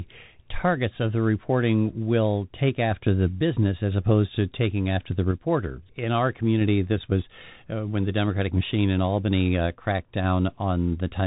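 Bluetooth CVSD headset codec damage runs from start to finish, and it is plainly audible. This narrowband scheme sends a single up-or-down bit per sample, with a step size that adapts as it goes, and the dull, scratchy result fits a 64 kbit/s stream. Nothing above 4 kHz survives, so the speech sounds boxed in. Sibilants come out rough and scratchy, loud bright sounds outrun the step and distort, and a grainy hiss sits beneath everything.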